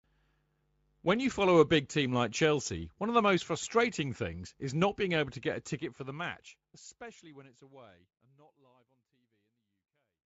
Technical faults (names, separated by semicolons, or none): none